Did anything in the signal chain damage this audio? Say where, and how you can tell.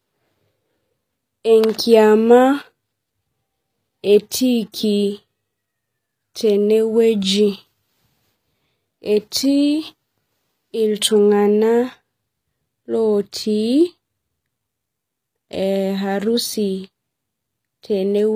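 Yes, at the codec stage, throughout the speech: it was likely passed through HE-AAC compression at a low bitrate, which fits about 24 kbps. The treble is rebuilt from copied lower bands and stops at 15.5 kHz, so its harmonics misalign and s sounds turn gritty and lispy.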